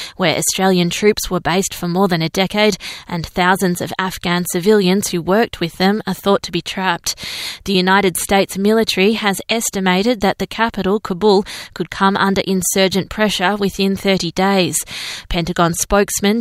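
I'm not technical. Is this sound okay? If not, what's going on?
Yes, nothing in this recording points to a technical problem: the signal stays steady and intact all the way through, with no dropouts, glitches or distortion to be heard.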